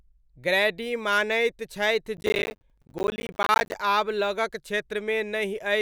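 From 2.17 s to 3.75 s, just after "ग्रैडी मानैत छथि", the speech breaks up with processor overload crackle. The processor falls behind and misses a long run of buffer deadlines, and each missed buffer is output as silence, a gap that fits a buffer of around 10 ms. Dozens of these hard-edged dropouts pile up across the stretch, so a gritty, tearing crackle rides over the speech until the load eases at 3.75 s.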